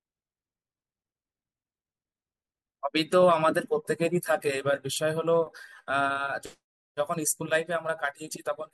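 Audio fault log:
No faults are heard in this speech recording. The log has no timed entries for it.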